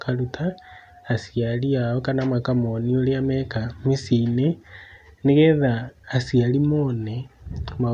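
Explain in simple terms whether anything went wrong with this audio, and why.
Nothing went wrong here.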